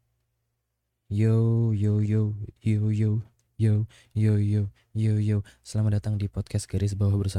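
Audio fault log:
2.05–2.08 s, compressed frames skipped: roughly 40 ms of speech drops out just before "yo yo". That fits about two 20 ms frames being lost. The audio jumps ahead at the join.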